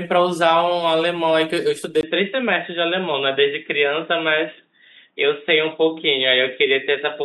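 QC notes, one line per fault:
2.01 s to the end, input switched to a poorer device: capture likely moved to a narrower-band input. After a 20 ms gap, the speech loses everything above 3.8 kHz and turns dull and boxy at much the same level, over a faint new noise floor.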